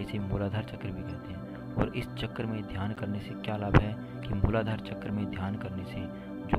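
At 2.95 to 3.02 s and again at 4.71 s, a corrupt frame decoded produces a brief chirpy burst near -30 dBFS, fitting a few damaged frames. Misread gains and codes misplace energy, showing as short vertical smears on a spectrogram and small waveform spikes.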